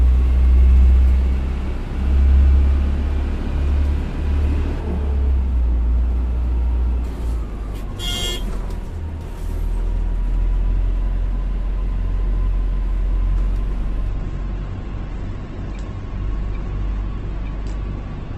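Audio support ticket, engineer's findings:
Sudden dulling from 14.09 s to the end, nothing above 8.2 kHz, no gap. The adaptive stream dropped to a lower bitrate, consistent with Opus falling from 64 to 12 kbit/s.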